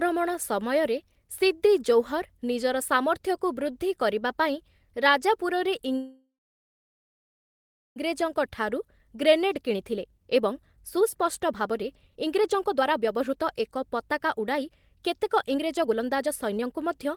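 A speech clip with two faults. A call audio freeze starts at 5.97 s, just after "ବୃଦ୍ଧି କରିବା ପାଇଁ ରାଜାପୁରରେ", and lasts until 7.98 s. The last sound carries on briefly as a fading buzz or hiss, then goes silent for about 1.65 s. Packets were likely held up in transit, leaving the jitter buffer empty. When the sound resumes, it picks up where it stopped. Nothing is lost, but the audio now runs about 2 s late. A jitter buffer speed-up follows from 8.12 s to 17.09 s. The backed-up buffer is drained by repeatedly cutting tiny pitch-period slices. The sound plays at 118% speed with unchanged pitch, so it sounds rushed. Roughly one and a half seconds are trimmed away in total, which recovers most of the delay added by the freeze.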